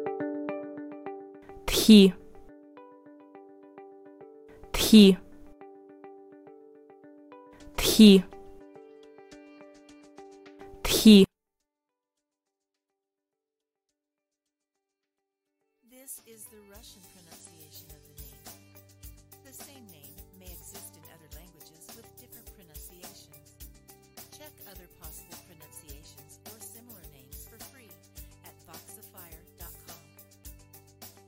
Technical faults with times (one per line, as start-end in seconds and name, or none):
11.24-31.27 one channel inverted